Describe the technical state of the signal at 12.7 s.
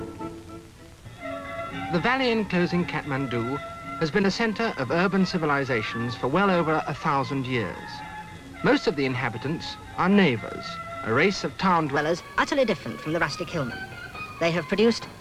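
At 12.7 s the signal sits inside a section at the wrong speed, running from 11.96 s to the end at 15.21 s. Playback there is 1.21 times faster, so everything sounds hurried and raised by roughly three semitones, likely because that stretch was resampled against a mismatched clock. On a spectrogram, harmonics and formant bands jump upward at 11.96 s and sit more widely spaced. The waveform shows events compressed closer together in time.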